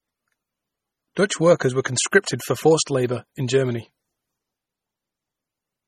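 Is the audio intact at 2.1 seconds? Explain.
No. At 2.1 seconds, as throughout the speech, this is likely low-bitrate audio saved at a high bitrate: MP3 at what sounds like 32 kbit/s, re-encoded near 192 kbit/s. The re-encode cannot restore what was lost, so the first pass's swirly artefacts and empty band above 14.2 kHz remain.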